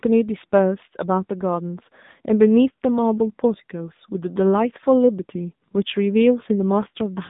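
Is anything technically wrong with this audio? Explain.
Yes. AMR narrowband mobile codec damage runs throughout: the speech is squeezed into a roughly 150 Hz to 3.7 kHz band with nothing above 3.8 kHz, and a vocal-tract model rebuilt from sparse pulses leaves it plainly buzzy and synthetic. This fits a low mode around 8 kbps.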